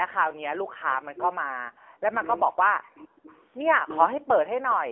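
Throughout the clip the speech has passed through the AMR narrowband mobile codec, at a coarse setting whose buzz fits a mode near 8 kbps. The codec rebuilds the voice from a vocal-tract model and a handful of excitation pulses per short frame, discarding everything else. The line band runs roughly 300 Hz to 3.5 kHz, with nothing above 3.8 kHz, so the speech is boxy and muffled. The damage is plainly audible as a buzzy, synthetic edge on every syllable.

From 0.23 to 0.53 s the background is gated by the echo canceller. While the far-end loudspeaker was active, the canceller clamped the microphone path, pulling the room sound down by about 40 dB for roughly 300 ms. The ambience briefly falls into near-silence and then snaps back once the canceller releases.

Two stretches show speech suppressed in double talk, from 0.81 to 2.28 s and from 2.51 to 3.32 s. With both ends likely talking at once, the canceller could not tell the local voice from loudspeaker echo and attenuated everything, sometimes very deeply. 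Over about one and a half seconds, then about 0.7 s, the voice sinks, thins out and breaks into fragments instead of holding a steady level.

Near the end of the second stretch there are two brief echo leaks, at 2.97 to 3.04 s and 3.29 to 3.36 s. These likely come from a loudspeaker at the other end whose canceller let part of its microphone pickup through, sending the speech back 466 ms late. Each is a very faint scrap of delayed voice, far below the main speech and lasting only about 70 ms.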